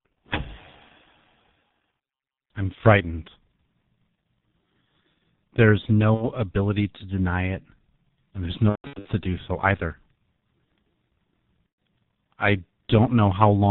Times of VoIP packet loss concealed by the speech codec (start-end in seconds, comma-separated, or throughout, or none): 6.14-6.28, 8.69-9.09, 11.70-11.73